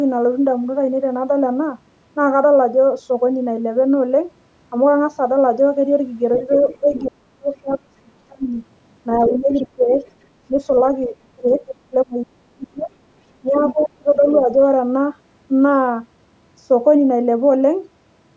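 Speech, with the other side's voice leaking through at 6.36–7.01 s, 9.33–10.11 s, 11.04–11.75 s and 13.59–14.39 s: a second, fainter voice sits roughly 20, 15, 15 and then 10 dB under the talker, likely because loudspeaker playback reached the microphone and echo cancellation left some behind. Speech suppressed in double talk follows at 6.48–8.49 s, 9.27–9.92 s and 11.08–14.49 s, where the talker's level sinks by up to about 40, 10 and 35 dB for around one and a half seconds, a third of a second and two seconds of each span, dipping just as that other voice overlaps, the canceller likely turning everything down when both sides speak at once. The band stops at 8 kHz, as expected from call microphone processing.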